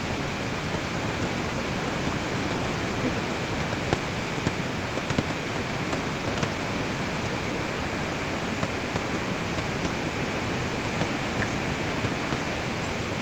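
The speech carries no technical faults, only the ordinary character of a call: the microphone processing trims the lowest bass, and the call codec leaves its usual coding texture with nothing above about 8 kHz, which fits an Opus stream sent as wideband audio.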